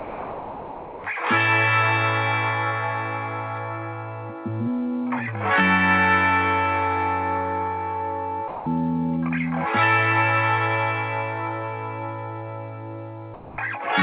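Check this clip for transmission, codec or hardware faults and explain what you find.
Three short stretches where the sound drops out and is replaced by steady, featureless noise, at 0 to 1.04 s, 8.48 to 8.66 s and 13.34 to 13.58 s. This is most likely sound dropped by the voice detector. The sender treated the audio as background and stopped sending, and the receiver filled the gap with comfort noise until the detector picked things up again. The first gap swallows the opening second, and the later two are brief holes of about 0.2 s. Throughout, nothing comes through above 4 kHz, which fits a narrowband G.711 call path.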